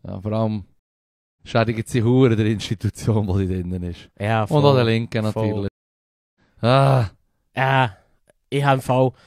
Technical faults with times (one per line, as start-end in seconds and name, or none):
0.79-1.41 stream reconnect
5.68-6.40 stream reconnect